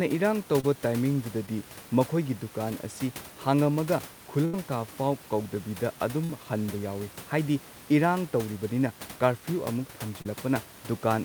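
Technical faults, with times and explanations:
0.60–0.64 s, short concealed packet loss: about 30 ms of audio arrived too late. The receiver extended the preceding sound to cover it, leaving a brief smear.
1.46–1.48 s, short concealed packet loss: a 10 ms hole was filled by continuing the previous sound, heard as a tiny wobble.
4.45–4.54 s, burst of packet loss: 80 ms was lost in succession. Concealment stretched the last sound into a fading buzz or hiss, and the audio resumes with that stretch missing.
6.24–6.30 s, burst of packet loss: 50 ms went missing. The fill continues the last sound, then fades before playback resumes further on.
10.22–10.26 s, short concealed packet loss: about 30 ms never arrived in time. The continued previous sound was blended back, giving a short smear where a brief sound may drop out.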